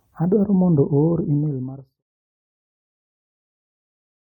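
No technical faults can be heard in this speech.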